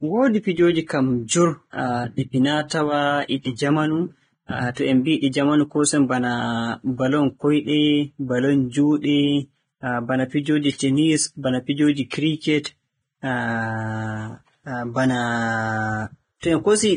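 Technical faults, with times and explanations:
Throughout: Vorbis compression, likely the cause of the hissy, grainy treble with nothing above 9.7 kHz; unlike a simple low-pass, the remaining highs turn noisy, fitting a bitrate near 22 kbps.
12.1 s: pre-echo, a brief hiss leading a sharp attack by about 18 ms as block-wide quantisation noise leaks backward; unlike reverb, it precedes rather than follows the onset.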